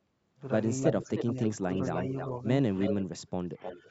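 A short speech recording carries two faults typical of a hands-free call. An echo leak is heard at 0.83–1.47, 1.72–2.27, 2.8–3.18 and 3.62–3.79 s. A delayed copy of the voice trails it by 310 ms. It sits about 5 dB below the speech in the first and third stretches and about 10 dB below in the second and fourth. The likely cause is a loudspeaker on the far end whose echo canceller let part of the microphone pickup through and sent it back. There is also speech suppressed in double talk, at 0.92–1.68 s and from 3.44 s to the end. The voice dips and partly drops out while the echo overlaps it, for roughly 400 ms in each stretch. The deepest cut is about 15 dB in the first and about 20 dB in the second. The likely cause is an echo canceller that could not tell its own talker from the returning echo and turned both down. The lowest bass is filtered out, which fits the call's microphone processing.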